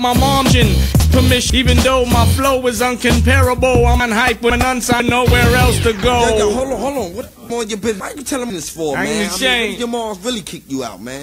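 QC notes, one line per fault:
0.5–1.5 s, 4.0–5.0 s and 7.5–8.5 s, chunks out of order: in each second, two half-second blocks play swapped, so the later 500 ms lands ahead of the one it should follow. Nothing goes missing, but the sound jumps around at the three hard joins.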